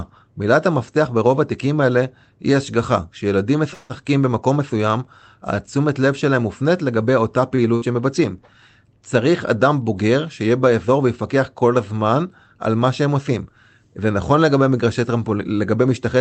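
Speech recorded through a call link, with a high end that stops around 8 kHz, which fits an Opus codec at a modest bitrate. From 3.73 to 3.93 s there is a call audio freeze. The last sound is drawn out as a fading buzz or hiss for about 163 ms. Nothing is lost, so the speech resumes exactly where it stopped, only later. Packets held up in transit likely emptied the jitter buffer. At 7.56 to 7.61 s comes a short stall from a late packet. One sound is held about 23 ms too long, with a slight buzz or dip. The packet then arrives and playback continues from the same point. Nothing is skipped. At 7.76 to 7.85 s there is a burst of packet loss. The receiver fills about 56 ms with a fading continuation of the last sound. Then the speech jumps ahead, with roughly 60 ms of it missing.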